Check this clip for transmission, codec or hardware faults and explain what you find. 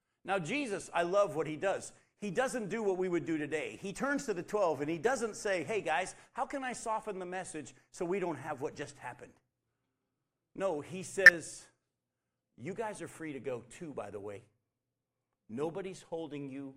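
There are two short bursts of DAB burbling, at 8.90 to 9.03 s and 11.24 to 11.38 s. Weak reception let bit errors, at a low residual rate of a fraction of a percent, pass the error correction and corrupt MP2 samples. Wrong samples disturb single sub-bands, so the speech briefly gains short blips of noise.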